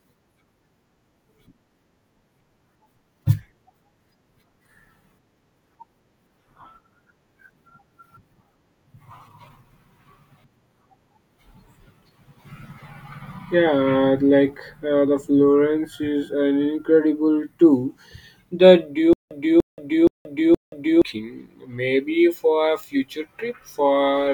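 From 19.13 to 21.02 s, stutter with silent gaps: a 295 ms fragment repeats four times with 177 ms silences, likely from a stalled stream.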